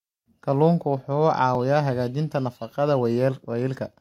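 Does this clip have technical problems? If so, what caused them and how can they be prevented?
Yes. At 1.55 s there is a dropped buffer (overrun). The recording software likely failed to read its input buffer before the hardware overwrote it, so a few milliseconds of speech disappeared. The audio on either side was joined directly, causing a slight jump forward with no gap of silence. To prevent this, enlarge the input buffer and give the capture process higher priority so it always collects samples in time.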